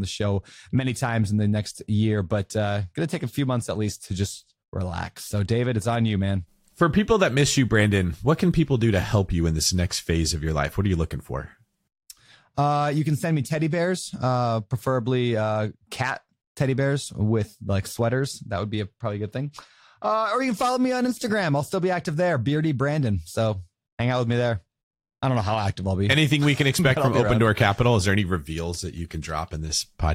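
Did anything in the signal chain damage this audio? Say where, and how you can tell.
No, nothing in this speech recording stood out on listening as damage from any stage of the signal chain.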